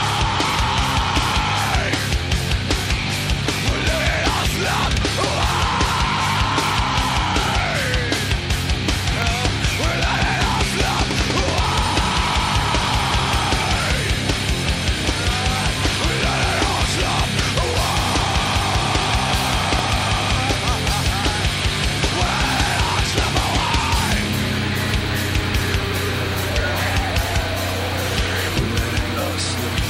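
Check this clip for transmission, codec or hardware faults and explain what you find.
Two loud pops appear, at 9.22 s and 19.79 s, each about 20 ms long and peaking roughly 15 dB and 10 dB above the sound. A sudden voltage step, likely from a switch, plug or static, enters the signal and is heard as a sharp pop. Each shows as a narrow spike on the waveform and a thin vertical broadband stripe on a spectrogram.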